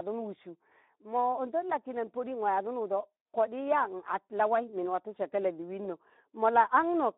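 From start to finish the speech runs through a Speex codec, squeezed into a 250 Hz to 3.7 kHz telephone band. The CELP coder is short of bits for the excitation, which fits around 11 kbps, so the speech comes out plainly hoarse and noisy.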